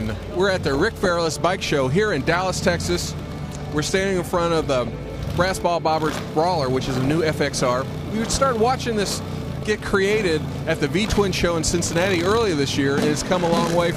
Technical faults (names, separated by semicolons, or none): DAB burbling